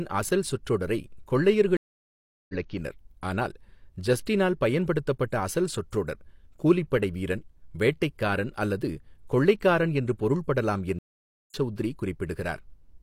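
At 1.77 s the speech cuts to silence for 720 ms, resuming at 2.54 s; at 10.99 s, right after "அல்லது கொள்ளைக்காரன் என்று பொருள்படலாம்", a 509 ms gap runs to 11.54 s. Both are stream reconnects: the link dropped, the player restarted its decoder mid-stream, and the first frame or so comes back muted or faded in. Unlike a plain dropout, the speech picks up roughly 0.7 s further on, so material is skipped rather than merely paused.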